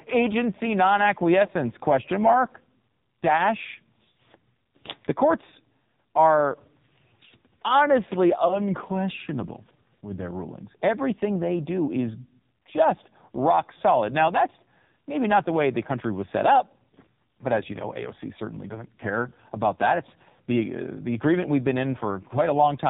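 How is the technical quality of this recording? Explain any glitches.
Pretty rough, honestly, with heavy narrowband mobile coding throughout and two short dropouts.

AMR narrowband mobile codec, whole clip: nothing above 4 kHz survives, and the speech comes out buzzy and synthetic. The codec rebuilds the voice from a vocal-tract model and a few pulses, and damage this heavy fits a low rate around 5.9 kbps.

Lost AMR speech frames, at 1.46 to 1.50 s and again at 8.48 to 8.62 s: each sounds like a brief dip or warble, consistent with a single 20 ms frame failing. The decoder reuses the last good pitch and vocal-tract settings at falling gain, then the voice comes back a bit rough.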